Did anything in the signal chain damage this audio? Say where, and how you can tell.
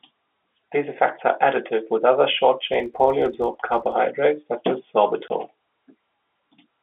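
Yes. From 2.74 to 3.97 s, between "are additive with other" and "such as", a 50 Hz buzz rides on the sound. It rises and falls with level. This is a filter restarted on every block in call processing. Each block starts from zero state and leaves a tick. The rate fits 20 ms blocks.

From 5.28 to 5.30 s, just after "such as", there is a 20 ms hole of pure silence with hard edges. This is packet loss filled with silence on the network. The gap length points to one lost packet, replaced by zeros instead of concealment.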